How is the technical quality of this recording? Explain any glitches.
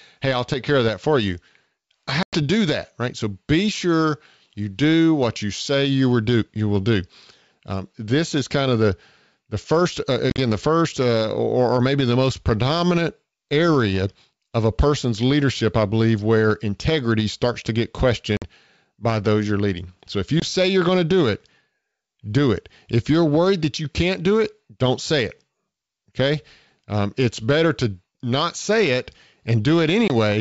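The recording has five dropouts from packet loss on an ADPCM call, in wideband G.722-style audio that reaches to about 7 kHz. The losses are at 2.23–2.36 s (about 100 ms, just before "do that right"), 10.30–10.39 s (broken gaps between "the first uh" and "the first uh or"), 18.37–18.44 s (50 ms, before "by those you're leading"), 20.40–20.44 s and 30.08–30.11 s. Each is a hard-edged silence. Afterwards the decoder's predictor and step size no longer match the sender's, so the sound resumes slightly distorted and settles within tens of milliseconds.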